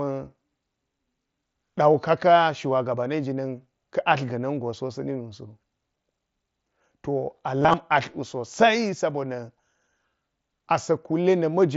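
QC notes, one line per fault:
7.61–7.74 s, concealed Bluetooth headset packet loss: 75 ms of scattered gaps, none over 15 ms, patched with repeated recent waveform. Repetitive cycles visible in the waveform.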